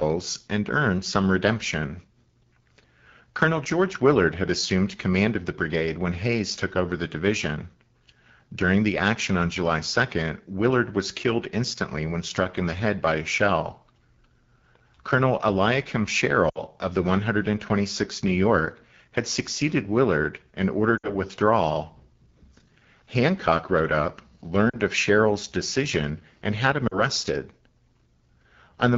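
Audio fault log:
Throughout: AMR wideband (HD Voice) codec. The speech carries a clearly audible rough, raspy edge. The codec models the vocal tract and drives it with pulses up to 6.4 kHz, then fills 6.4 to 7 kHz with shaped noise. At a low rate there is too little detail to rebuild the voice cleanly, so it comes out gritty. The damage level points to one of the lowest modes, likely 8.85 kbit/s.
16.49–16.59 s, 20.97–21.16 s, 24.69–24.77 s, 26.87–27.00 s: lost AMR speech frames. Each spot drops to near silence within two frames, and then the speech returns weak or rough. Corrupted frames failed their checksum. The decoder filled the gaps by reusing the last good pitch and vocal tract settings at falling gain. The first two gaps sound like about 60 ms lost, which fits three 20 ms frames. The last two sound like about 40 ms lost, or two frames.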